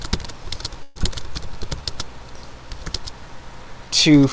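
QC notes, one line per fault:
0.83–1.06 s, long network dropout: the sound stops moving forward and is replaced by a smeared, fading continuation of what came just before, lasting about 0.2 s. There is no true silence. The audio then resumes further on, with about 90 ms of the original skipped. The likely cause is a run of packets that never arrived, after which the receiver's delay shifted by roughly 50 ms. The skip in the sound marks it as a loss, not a slow-down.
1.22–2.06 s, jitter buffer slow-down: the audio drags at about 90% speed but keeps its pitch, adding 87 ms over the stretch. Sustained parts sound drawn out. The receiver was rebuilding its reserve by repeating single pitch periods. A tape-style slow-down would drop the pitch, and here it stays put. Nothing is skipped, which also sets it apart from the dropout. The 8 kHz ceiling from the G.722 call path holds steady throughout.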